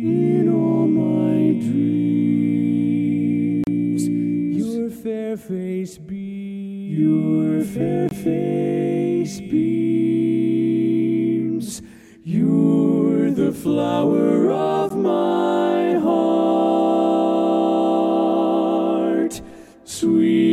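At 3.64 to 3.67 s, 8.09 to 8.11 s and 14.9 s the sound drops out for about 33, 22 and 14 ms: a gap at a join of encoded pieces, where leftover encoder delay and end padding sit between separately encoded chunks, giving brief, slightly smeared silences before it carries on.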